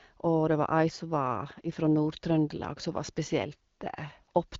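No technical faults can be heard in the speech, which has the clear, band-limited sound of AMR wideband (HD Voice) coding at a healthy rate.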